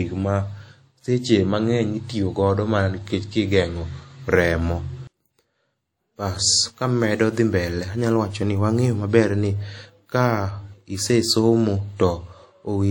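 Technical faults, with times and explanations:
Throughout: WMA compression. The speech has plainly audible coding damage: a ringing, washy quality around the voice and a hiss that swells and fades with the signal. This is likely from Windows Media Audio encoding, whose long transform blocks smear quantisation noise across tens of milliseconds and drop weaker spectral lines. The degree of damage fits a bitrate of around 48 kbps. Content extends up to 20.1 kHz, so the encoder has not imposed a lower bandwidth limit.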